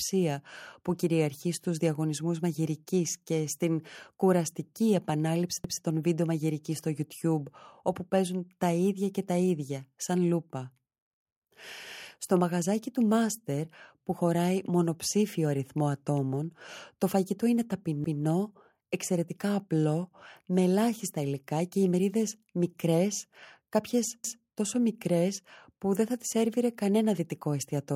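Overlapping chunks appear at 5.64–5.84 s, 18.04–18.24 s and 24.24–24.44 s. The speech was handled in blocks of about 6 s, and each new block began 200 ms before the previous one ended, so that 200 ms stretch plays twice at each of these joins. The result is a brief stutter, a small backward skip where the same fragment of speech is heard again before the sound continues.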